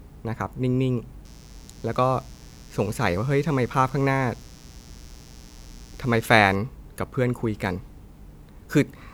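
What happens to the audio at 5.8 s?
At 5.8 s a mains buzz is running under the speech, present from 1.25 s to 6.56 s. Switching spikes twice per 60 Hz cycle spread harmonics into the kilohertz range, some 30 dB down, so it rasps rather than giving the smooth low tone of plain hum.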